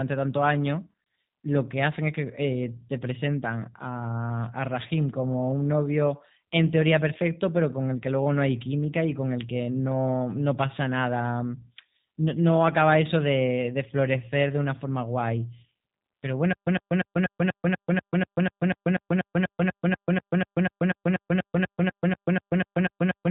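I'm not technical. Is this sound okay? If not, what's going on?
No. The whole recording has the sound of the G.729 codec: the voice is cut off above 3.8 kHz and sounds slightly rough and robotic throughout, not only in patches.

From 16.53 s to the end there is a stutter with silent gaps. The same 0.11 s scrap repeats every 0.24 s with dead silence between, likely from the player stalling. It is a repeat, not a skip.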